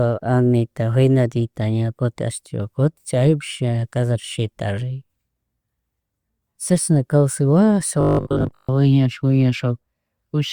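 From 8.01 to 8.69 s the speech collapses into robotic sound from repeated short buffers: a rigid, metallic 50 Hz buzz that loosely tracks the words. The likely cause is audio arriving too slowly, so playback loops the last 20 ms chunk over and over, repeated for most of that stretch, while fresh audio is lost. On a spectrogram this appears as flat, evenly spaced harmonics 50 Hz apart. The waveform shows identical 20 ms cycles repeating.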